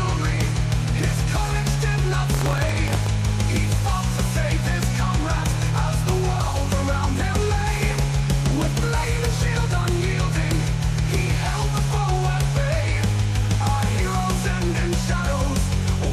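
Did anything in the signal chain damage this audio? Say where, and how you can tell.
Yes. Between 2.30 and 3.11 s there's buffer tearing at the driver/buffer stage. You get a rattly, robotic buzz at 43.1 Hz riding on the signal, which fits a 1024-sample buffer. The app's write pointer and the hardware's read pointer have slipped into each other, so every period plays a small sliver, a couple of percent, of audio from one lap back, roughly 70 ms stale, with hard splices on both edges.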